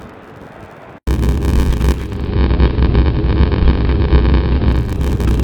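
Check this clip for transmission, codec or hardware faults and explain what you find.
Two faults are present: a block size mismatch with zero padding that runs through the whole clip, and a digital radio blend to analogue from 1.93 s to 5.04 s.

Block size mismatch (padded), throughout: one stage hands over shorter blocks than the next stage reads, and zeros fill the remainder of each block. The result is a steady buzz at 93.8 Hz, which fits a 512-sample read block at 48 kHz. Timing stretches to 0.861 of normal speed while pitch stays put. A resampling error would slow the sound and lower its pitch together. Here only the timing changes, and the regular gap rate points to padding.

Digital radio blending to analogue, 1.93 s to 5.04 s: the receiver lost the digital stream and cross-faded over 396 ms to the AM broadcast of the same station, then returned. During the analogue stretch the treble is reduced, hiss sits roughly 30 dB below the signal, and the level shifts by about 3 dB. 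A plain codec bandwidth limit would cut the treble but add no hiss, and it would not fade in and out at both ends like this.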